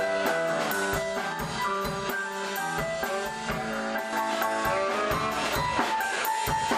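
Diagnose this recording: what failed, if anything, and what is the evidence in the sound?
A channel delay fault at the buffer stage: from 0.98 s to 4.13 s one channel runs around 5 ms behind the other, which fits a short buffer offset, and the two are summed to mono. Content common to both channels cancels where the offset puts them half a cycle apart, starting near 100 Hz and repeating at evenly spaced intervals above it. This comb filtering makes the sound hollow and phasey, with fixed notches that don't move.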